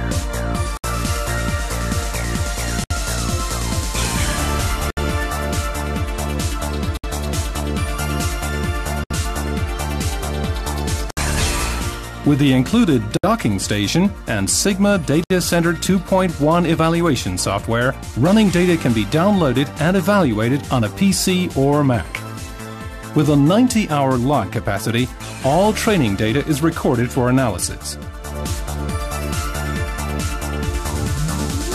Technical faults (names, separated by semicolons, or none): gap at a join of encoded pieces